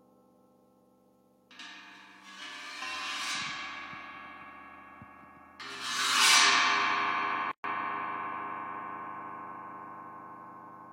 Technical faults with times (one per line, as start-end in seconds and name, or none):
7.51-7.64 gap at a join of encoded pieces